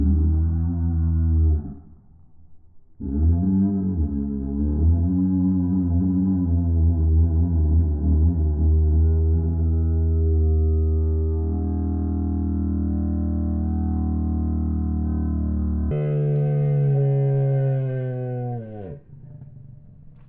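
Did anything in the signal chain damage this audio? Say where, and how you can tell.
Yes. From 15.91 s to the end at 20.28 s the sound jumps a full octave, 12 semitones, and runs at double speed. This is a wrong sample rate fault at playback: samples clocked out at twice their recorded rate, fitting 16 kHz material played at 32 kHz.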